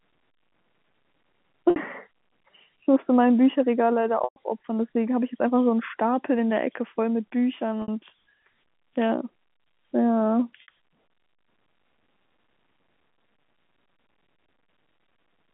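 At 1.70, 4.24, 7.82 and 10.62 s, the telephone-band speech suffers packet loss with pitch repetition. Each 60 ms gap fits three lost 20 ms packets, and the longer 120 ms gap at 4.24 s fits six. The receiver fills each gap by repeating the last pitch period, fading it out over about 50 ms, so the short gaps hold as a brief buzzy, sustained tone, while the longer gap fades into silence and the speech returns with a short cross-fade.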